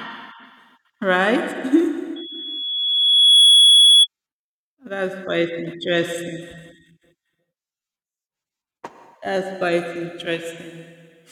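At about 2.16 s a loudspeaker feedback squeal starts creeping in: a single tone near 3.4 kHz that swells over roughly a second and a half until it's sitting something like 15 dB above the speech, then it's gone at 4.07 s. What's happening is the mic is hearing the speaker it feeds, and at that one frequency the loop gain tops unity, so the tone keeps feeding itself until the loop gets broken.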